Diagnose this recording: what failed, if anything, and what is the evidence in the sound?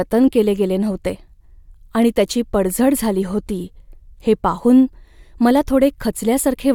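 Nothing failed in this recording, and the sound gives no evidence of a fault at any stage.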